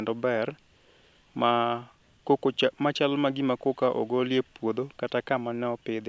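No technical faults are audible anywhere in the speech recording.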